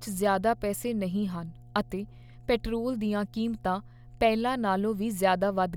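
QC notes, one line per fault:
Throughout, mains hum: power-line current is leaking into the signal path, probably through a ground loop or a nearby transformer. It leaves a steady 60 Hz tone under the speech, well below the voice level but constantly audible, with a low drone.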